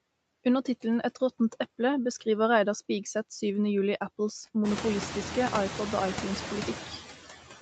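From the start of the speech, the background noise ducks away in the gaps between words and swells back up underneath them. These are noise suppressor artifacts: the suppressor estimates which frequency bands hold steady noise and pulls them down, by about 15 dB, frame by frame. Around 4.5 s the room noise climbs by about 22 dB, leaving the suppressor far more to remove, with the audio band-limited to 8 kHz throughout.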